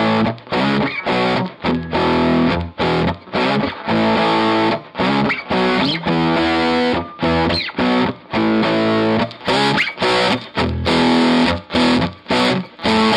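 The sound is dull and muffled from 0 to 9.22 s, a sign of de-emphasis applied wrongly: a treble cut slopes smoothly downward, leaving 10 kHz about 13 dB below 1 kHz.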